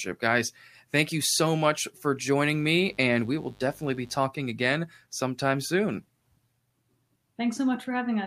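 From 2.41 to 4.27 s, between "you so much for" and "again sometime soon", a mains buzz sits well below the speech. Sharp switching spikes from something like a dimmer or rectifier, twice per 50 Hz cycle, leak in, spreading harmonics of 50 Hz up into the kilohertz range. That spread is what separates it from plain hum: a clean hum is a smooth low tone, while this is a raspy, edged buzz with a bright upper texture.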